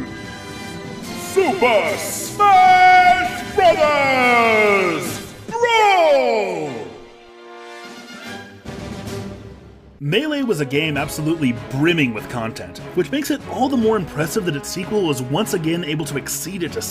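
No fault is audible anywhere in the recording.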